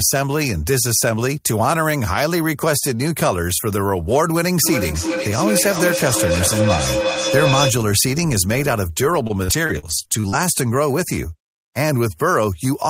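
From 4.63 to 7.85 s, a feedback howl builds. Two devices in the same room are on the call, so the microphone picks up its own loudspeaker output and sends it around again, gaining level with each pass. The loop favours a band around 500 Hz, so the repeats narrow into a tone there, coming around roughly every 0.4 s and peaking at about 1 dB below the speech level, nearly as loud as the talker, until the loop breaks.

Between 9.27 and 10.34 s there is repeated packet loss, heard as robotic sound. Audio data keeps going missing or arriving too late, and each hole is patched by stretching the last received sound forward. The holes come in quick succession, none longer than 49 ms, and together the patches fill about 231 ms, roughly a fifth of that stretch. The speech turns choppy and robotic, with small pieces missing.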